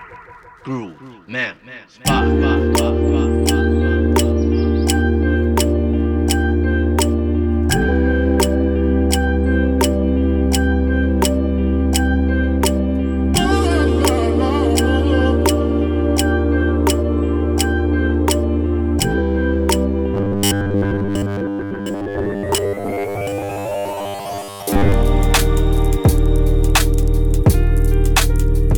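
From 20.14 s to 24.92 s the sound turns into robotic sound from repeated short buffers: a rigid, metallic buzz at 100 Hz. This likely comes from delayed audio being covered by looping 10 ms chunks for most of that stretch. Unlike ordinary dropouts or codec warble, it imposes one fixed pitch however the underlying sound moves.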